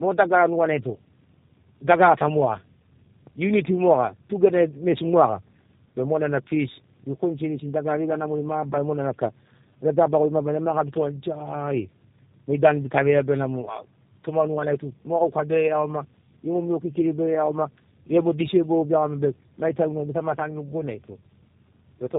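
Speech, with tandem speech coding throughout: it is cut off above 3.8 kHz and sounds rougher and more warbly than one low-rate coder would, which points to two passes through an 8 kbit/s codec such as G.729A, rather than plain band-limiting.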